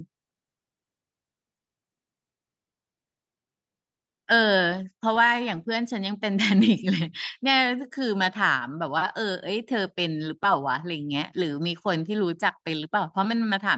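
Nothing here stands out as a fault; the speech simply has the usual call sound, with the microphone processing and the Opus call codec holding everything below 8 kHz the way a normal call would.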